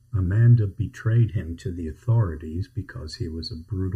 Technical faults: channel delay (comb filtering); drift correction step

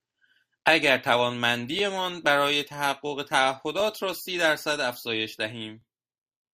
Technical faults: overlapping chunks

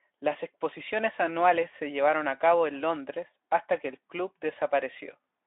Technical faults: none

